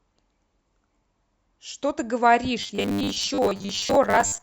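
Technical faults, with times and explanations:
2.61 to 4.42 s, robotic sound from repeated short buffers: from 2.61 s to the end the speech hardens into a rigid, metallic buzz at 100 Hz that still loosely tracks the syllables. The likely cause is audio arriving too slowly, so the playback fills the gaps by looping a chunk of about 10 ms, which sets the 100 Hz pitch, while the real audio underneath is skipped. About half of what is heard is repeated material.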